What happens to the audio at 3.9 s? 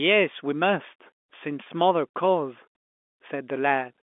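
Nothing goes wrong at 3.9 s: the speech carries on intact through that moment, with the usual narrow telephone band of G.711 coding and no dropout, click or other break.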